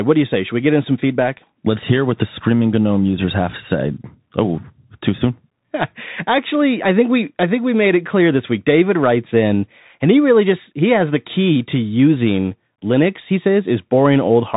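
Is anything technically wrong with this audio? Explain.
Yes. The whole clip of speech carries the sound of a Bluetooth CVSD headset codec. The speech is band-limited, with nothing above 4 kHz, so it sounds thin and boxed in. CVSD sends one bit per sample, just up or down, and adapts its step size. Here the damage is plainly audible. Loud high-frequency sounds outrun the step and distort. S sounds turn scratchy. A granular hiss sits under the speech. This all fits a 64 kbps CVSD link.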